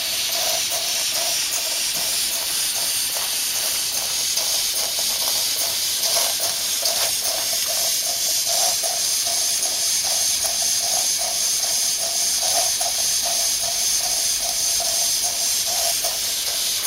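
From start to finish, the loudest peaks crackle and turn gritty. This is hard clipping: the signal is driven about 10 dB past what the stage can pass, so well under one percent of samples have their tops sliced flat, adding harsh high harmonics.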